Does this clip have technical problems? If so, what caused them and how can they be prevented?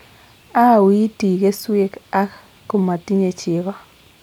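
No, the speech in this clip has no audible technical faults, so there is nothing here to trace to a cause or to prevent.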